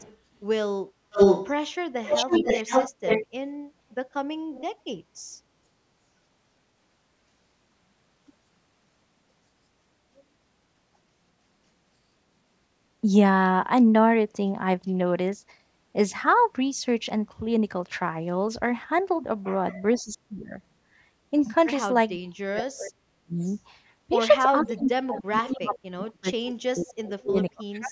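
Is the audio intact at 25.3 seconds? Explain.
No. From 24.6 to 25.76 s, a far-end echo canceller likely failed to remove its own loudspeaker pickup, producing an echo leak: a copy of the voice returns about 0.48 s late, roughly 10 dB below the speech.

Overlapping that, from 24.63 s to the end at 27.91 s, speech is suppressed in double talk. With both sides talking, the canceller likely could not tell the talker from the echo and turned both down. The voice dips by up to roughly 35 dB, dulling or dropping out.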